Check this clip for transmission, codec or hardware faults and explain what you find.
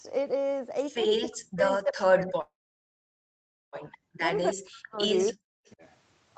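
Three kinds of fault turn up in this speech, all of the sort a call path produces. The audio carries nothing above 8 kHz, which fits the band limit of an Opus call link.

Speech suppressed in double talk runs from 1.18 to 4.98 s and totals about 1.5 s, with drops as deep as about 40 dB. Two short repeats follow at 5.30 to 5.42 s and 5.74 to 5.82 s, the second only about 20 dB down. The likely cause is that the echo canceller mistook overlapping talk for echo and ducked the wanted speech. You hear it as chunks dipping or vanishing.

A call audio freeze sits from 2.41 to 3.76 s. The likely cause is delayed packets starving the jitter buffer, so about 1.3 s gets padded, roughly 1.2 s of it silent. Afterwards the speech resumes where it paused, shifted later, with nothing actually lost.

Echo leak shows up three times, at 3.89 to 3.97 s, 5.27 to 5.33 s and 5.66 to 5.71 s. Each is a faint copy trailing the speech by 283 ms, roughly 20 to 35 dB down. 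The likely source is a loudspeaker at the far end whose canceller let residue back through, heard as brief ghostly scraps.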